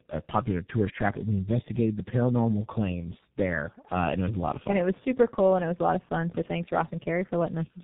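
Throughout the clip, tandem speech coding: the call was decoded and re-encoded by two low-rate speech codecs in a row, which fits a G.729A to G.711 to G.723.1 chain. The speech sounds rough, muffled and warbly, with nothing above 3.8 kHz.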